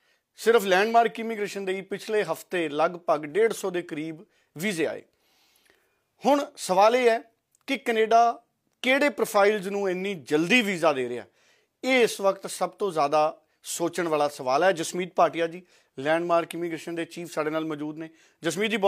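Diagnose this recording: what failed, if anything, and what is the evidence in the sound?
Nothing failed; no stage shows audible trouble.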